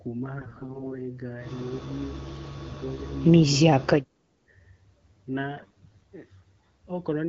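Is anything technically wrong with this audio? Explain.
Yes, there are two kinds of fault.

AMR bit errors, from 0.38 to 0.92 s and again from 5.57 to 6.03 s: a weak radio link corrupted the lightly protected bits of the AMR-WB frames, at a fairly high rate, while the check on the critical bits still passed, so the decoder trusted bad data. Its excitation pulses and fine pitch, gain and spectral values came out wrong, and the speech keeps roughly its pitch and loudness but turns hoarse, scratchy and gargling.

Speech suppressed in double talk, from 2.64 to 3.14 s and from 3.85 to 4.20 s: the likely cause is an echo canceller that couldn't tell this talker from loudspeaker echo while the far side was also speaking, so it turned the talker down. The speech level dips by about 15 dB in the first stretch and by about 30 dB in the second, for a few hundred milliseconds in each. The underlying wideband coding sounds only lightly coloured, which fits a 12.65 kbit/s mode.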